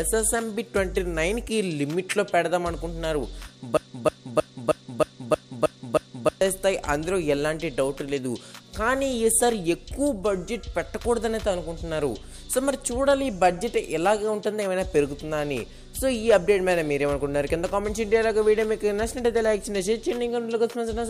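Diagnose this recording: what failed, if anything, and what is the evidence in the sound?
From 3.77 s to 6.41 s the audio falls into a broken-record loop: a single fragment about 315 ms long plays eight times back to back, each pass identical, and then normal audio resumes with the intervening material missing. The exact repetition points to the playback or streaming buffer stage. The likely mechanism is a stall in the player, encoder or stream, during which the last held fragment was resent in place of new data.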